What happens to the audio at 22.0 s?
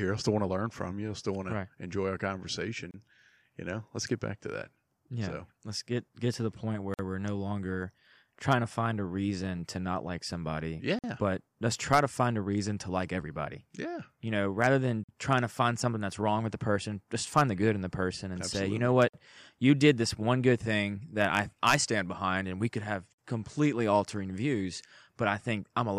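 Nothing goes wrong at 22.0 s; the speech there carries on intact, with no dropout, click or distortion.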